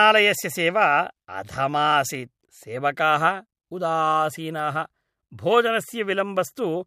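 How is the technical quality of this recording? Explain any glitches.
The speech carries three brief clicks at 2.15 s, 4.59 s and 5.62 s, each most likely from dropped samples: a handful of samples, a fraction of a millisecond, go missing, so the waveform jumps abruptly. Each is heard as a single sharp tick.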